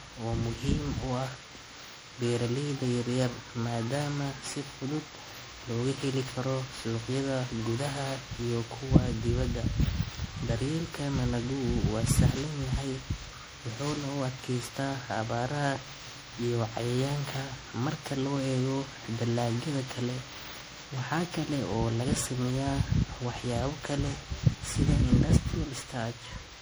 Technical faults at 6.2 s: generation loss

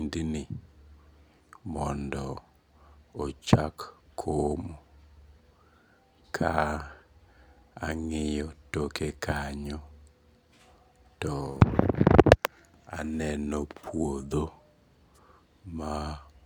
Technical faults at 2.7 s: none

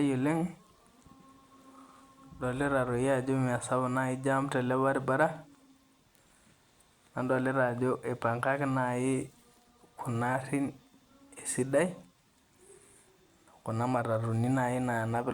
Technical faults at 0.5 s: none

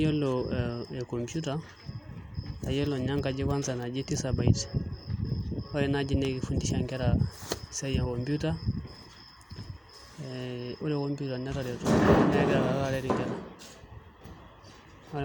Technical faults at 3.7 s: none

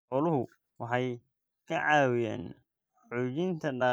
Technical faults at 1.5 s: time-stretched section

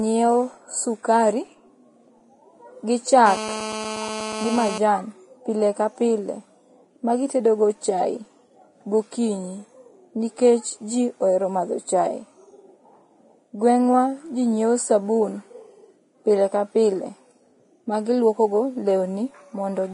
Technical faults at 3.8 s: Vorbis compression; GSM phone buzz

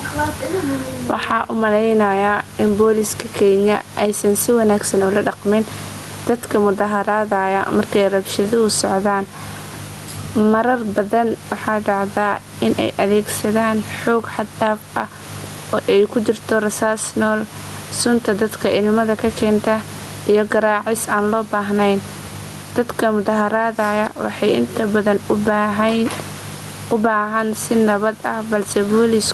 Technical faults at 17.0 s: gain pumping

